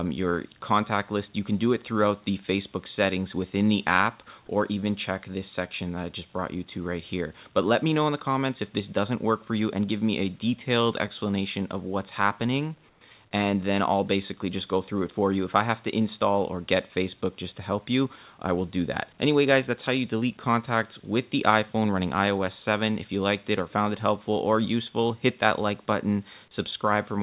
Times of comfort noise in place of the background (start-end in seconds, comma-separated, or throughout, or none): 12.89-13.01